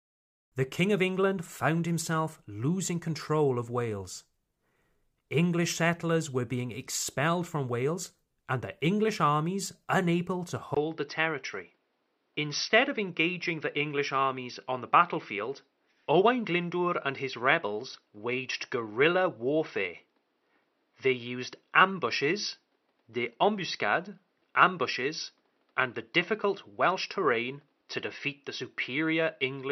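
At 10.75 s the speech drops out for about 20 ms, then returns duller and boxier through to the end, with nothing above 5.9 kHz. The level stays the same, but a faint new background noise appears, roughly 45 dB below the speech. The likely cause is the input switching to a poorer device, such as another microphone or a headset's call profile, whose narrower band and own noise replace the original pickup.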